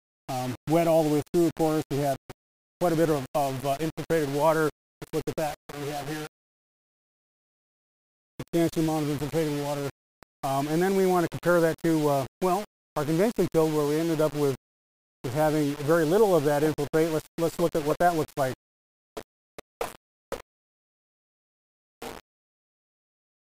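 From start to finish the audio carries a grainy, gritty distortion that rises and falls with the sound itself, most obvious as levels drop, where quiet passages turn rough and the faintest parts sputter or cut to silence. This is low bit depth without dither, likely from rounding the signal to about 5 bits. The error sits only some 20 dB below the signal. A waveform view shows visible staircase steps, and a spectrogram shows signal-dependent hash across the whole band.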